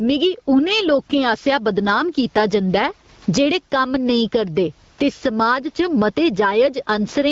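Throughout, the gain swings by roughly 15 dB. This is gain pumping, likely a fast limiter clamping down on excessive microphone gain.

From 4.91 to 4.97 s, after "जेह्ड़े कम्म नेईं करदे" and before "ते समाज", a smooth, steady hiss briefly stands in for the real background. This is AMR comfort noise, generated by the receiver to fill a 60 ms stretch when no speech frames arrived.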